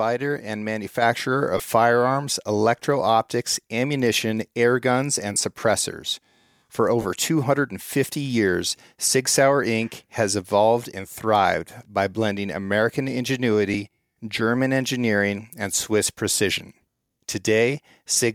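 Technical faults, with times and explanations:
1.02 s, microphone volume stepped up: speech and background noise rise together by about 4 dB in a single step. The call software judged the input too quiet and raised the device's input gain at once, so the level change is abrupt.
1.57 to 1.60 s, 5.34 s, 7.02 to 7.05 s and 13.74 s, lost LE Audio frames: four brief dropouts of 22.5, 15, 30 and 7.5 ms. The first comes just before "firearms electro optics ammunition", the second just after "ammunition air guns and". The Bluetooth link dropped frames, and the LC3 decoder filled each gap by repeating the last spectrum with randomised phase. Voiced sound therefore turns into a short, noisy smear. The durations fit 7.5 ms frames.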